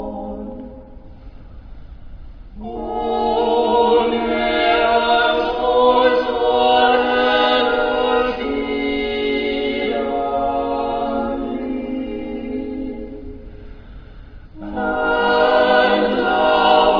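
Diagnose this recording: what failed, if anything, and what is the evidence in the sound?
Nothing failed here as far as I can hear, so there's no stage in the chain to point at and no evidence to chase down.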